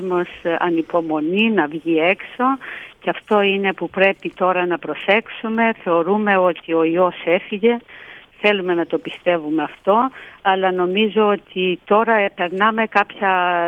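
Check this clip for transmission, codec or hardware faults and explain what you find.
One fault runs through the whole clip. From start to end, a steady ticking at 20 per second rides on the sound, present only while there is signal. This is a resampler restarted on every block. Each 50 ms block was converted separately, probably from 44.1 kHz to 48 kHz, so every block edge was computed without its true neighbouring samples. That leaves a small error at each boundary.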